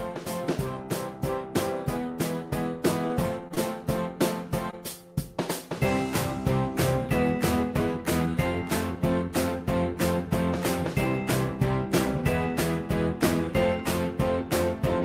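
Between 3.07 and 3.59 s the audio turns choppy and robotic, with four brief dropouts patched over. This is repeated packet loss, with the longest gap about 25 ms. At 4.71 to 4.75 s a short smear or wobble follows, from short concealed packet loss where about 20 ms was filled in from the preceding sound.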